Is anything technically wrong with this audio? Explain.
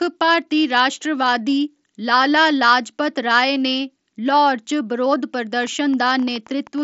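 Yes, there's a train of clicks near the end, from 5.64 s to 6.79 s. It's about ten sharp, similar-shaped pops at roughly 8.7 per second, spaced unevenly, with peaks around as loud as the speech itself. The likely cause is electrical interference or a faulty connection or power supply dropping pulses into the signal. Under it, the speech band stops around 7.7 kHz, as you'd expect from a wideband Bluetooth headset link.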